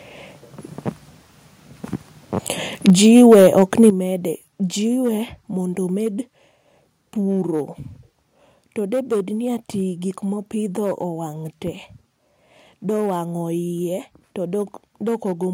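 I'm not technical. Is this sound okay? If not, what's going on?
No, not quite. Throughout the speech there's hard clipping: the loudest moments are too big for the recording to hold, so their tops get sliced flat and crackle. From 2.88 to 3.89 s it gets worse with a harsh, gritty edge, likely microphone overload from the input being set too high. The level also suddenly drops at 2.9 s and again, more sharply, at 3.9 s, likely the call software turning the microphone volume down in steps after those distorted peaks.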